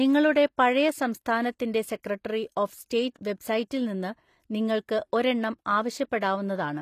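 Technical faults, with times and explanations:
Throughout, HE-AAC compression: the treble is likely being rebuilt by band replication rather than coded, so sibilants come out gritty and a bit lispy, with nothing above about 14.9 kHz. The damage is plainly audible, which fits a low bitrate of around 24 kbps.
2.03 s, 3.14 s and 6.20 to 6.22 s, pre-echo: just after "പഴയ സംസ്ഥാനത്തിൻ്റെ", and at the other two spots, a sharp attack gets a short hiss smeared 14 to 20 ms ahead of it. The codec spreads noise sized for the loud onset across the quiet moment before it, softening the attack.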